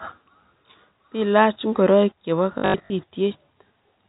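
Packet loss with last-packet repetition hits from 2.58 to 2.90 s. About 220 ms of audio goes missing across that 320 ms stretch, in runs up to 80 ms, and each gap is filled by replaying the previous packet. The result is a brief robotic stutter, buzzing near 50 Hz, which fits 20 ms packets, all within the 4 kHz telephone band of the G.711 A-law coding.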